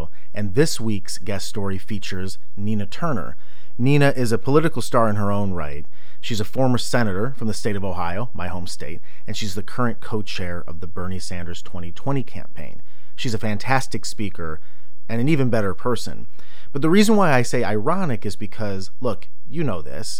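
A constant DC offset runs through the whole recording, shifting the entire speech waveform away from zero by about -15 dBFS. The offset itself is inaudible, but it consumes headroom on one side and leaves a steady, unchanging component at the very bottom of the spectrum.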